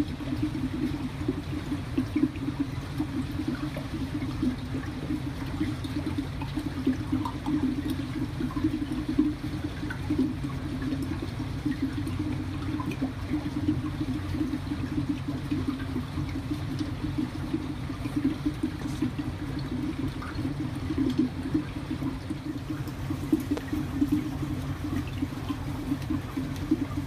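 A loud pop at 23.57 to 23.60 s: a single sharp burst, roughly 15 dB above the surrounding sound, lasting under 30 ms while the audio continues beneath it. The likely cause is a sudden voltage step or spike entering the signal chain, from a connector, a switch, static discharge or a driver glitch, which the following circuitry shapes into a brief pulse heard as one hard click-thump.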